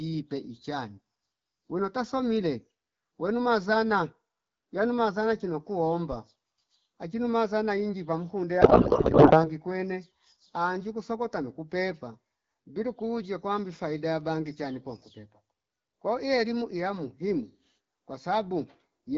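From 8.61 to 9.50 s, just after "achinu mazana inji pamkunde", a codec payload misread takes over. The speech turns to garbled noise and warble that barely tracks it. This fits octet-aligned AMR frames being read as bandwidth-efficient. Clean AMR-WB speech returns at "kwene anji kusokota nuku".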